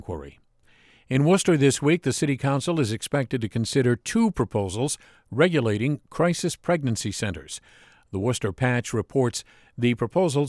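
Nothing technically wrong turns up anywhere in this stretch of speech; it's a fault-free recording as far as a listener can tell.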